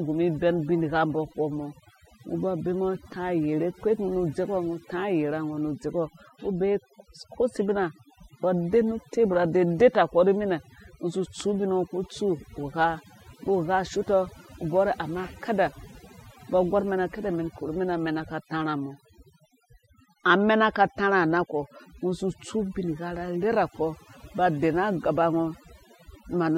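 Speech, with overdone noise removal throughout. A too-strong noise reducer gates frequency bands near its noise estimate, leaving a lowered background broken into twinkling specks.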